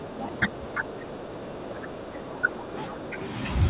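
From 0.0 to 3.19 s the speech is pulled down, by around 10 dB at its deepest, for about three seconds in all. This is likely speech suppressed in double talk, with the echo canceller attenuating the near talker along with the echo. The narrowband sound, with nothing above 4 kHz, fits a G.711 call path.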